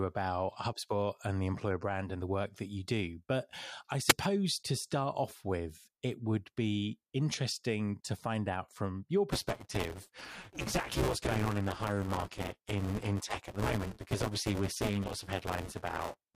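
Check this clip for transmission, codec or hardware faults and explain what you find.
Two faults are audible in the speech: a wireless microphone squelch dropout and buffer tearing.

At 4.08 to 4.13 s, just before "to start off with", a wireless microphone squelch dropout occurs. The radio signal fades, hiss rises briefly, and the receiver's squelch mutes for an instant. On a spectrogram this shows as a broadband noise smear around a tiny gap in the waveform.

From 9.31 s to the end, after "find out from your", buffer tearing sets in. The writer and reader of the ring buffer have slipped, so around 40 percent of each period replays audio about 10 ms old, with hard joins on both sides. This produces a robotic 200 Hz buzz that is present only while speech is playing. A spectrogram shows regular vertical striations every 5 ms and a harmonic comb at multiples of 200 Hz. The waveform shows repeated discontinuities at the same spacing.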